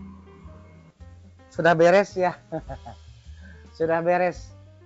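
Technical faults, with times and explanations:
Nothing stood out on listening; the sound came through the call path with its content limited to below 8 kHz, as that codec delivers it.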